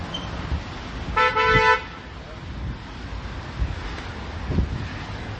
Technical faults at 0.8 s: MP3 compression

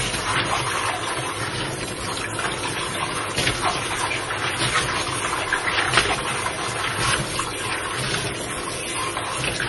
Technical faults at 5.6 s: MP3 compression; clock slip clicks

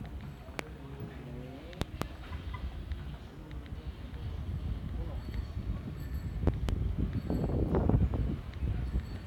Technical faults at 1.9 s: loud pop

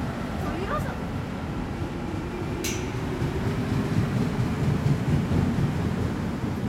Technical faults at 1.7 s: none

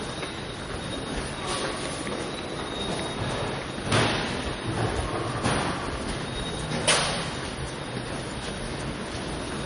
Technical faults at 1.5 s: MP3 compression

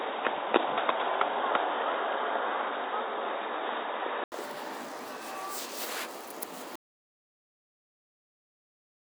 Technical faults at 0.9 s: input switched to a poorer device

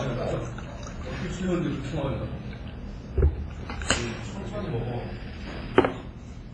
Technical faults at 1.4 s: WMA compression

